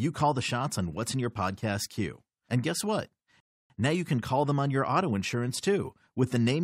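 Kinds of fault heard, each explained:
Rebuffering stall: Right after "guess what", the speech drops into dead silence from 3.40 to 3.70 s, then picks up at exactly the point where it broke off, with no syllable skipped or repeated. The gap adds about 0.3 s to the running time without losing any audio. This happens when playback drains the downloaded audio faster than new data arrives, so the player halts and waits for the next chunk before continuing.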